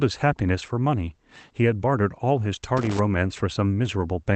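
From 2.77 to 2.99 s, loose connector crackle: a worn contact intermittently breaks the line, chopping the speech into an irregular burst of scratchy crackle.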